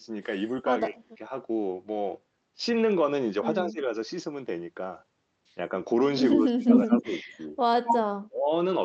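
At 0.88 to 1.32 s, 3.63 to 3.9 s, 6.34 to 7.11 s, 7.31 to 7.56 s and 8.28 to 8.51 s, both ends of the call were likely talking at once, and the echo canceller, unable to tell this speech from its own loudspeaker echo, turned everything down. This is speech suppressed in double talk: the speech dips or drops out in short stretches, by around 30, 15, 25, 15 and 35 dB, with each episode losing a few hundred milliseconds of audio.

From 6.71 to 7.03 s and again from 7.84 to 8.01 s, the far end's echo canceller likely failed to remove all of what its microphone picked up from the loudspeaker, and the remainder came back as echo leak. A copy of the speech trails it by 199 ms, a little louder than the direct speech the first time and about as loud the second, over audio already limited to roughly 8 kHz by the Opus call path.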